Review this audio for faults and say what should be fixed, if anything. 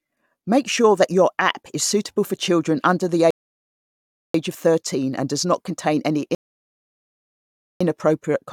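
The player's buffer drained twice, a rebuffering stall each time, so playback halted until more data arrived. The speech drops to silence from 3.31 to 4.34 s and again from 6.35 to 7.81 s, then resumes exactly where it stopped, adding about 1.0 s and 1.5 s. Larger playback buffers or adaptive bitrate switching would keep the player supplied through slow delivery.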